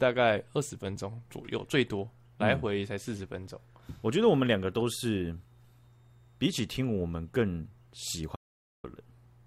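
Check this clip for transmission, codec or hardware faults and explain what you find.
One fault shows up, near the end of the speech. An audio dropout to silence from 8.36 to 8.84 s was likely caused by the input link briefly failing while recording continued, writing silence: the speech cuts off abruptly for 0.48 s, with no room tone, before resuming.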